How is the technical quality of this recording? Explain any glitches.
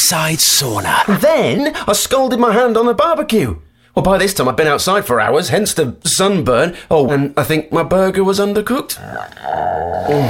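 The recording has three audible jumps. At 1.58 s, 7.08 to 7.13 s, and 8.96 to 8.99 s the sound lurches forward, losing about 40 ms, 150 ms and 100 ms. These are compressed frames skipped: whole frames were missing or rejected by the decoder, so playback leaps ahead in steps that fit a 10 ms frame.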